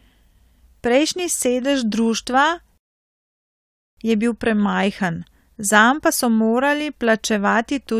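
At 2.78 s the speech cuts to silence, a rebuffering stall. The player has run out of downloaded audio and waits for more. At 3.97 s the speech resumes exactly where it stopped. Nothing is lost, but about 1.2 s of dead air is added.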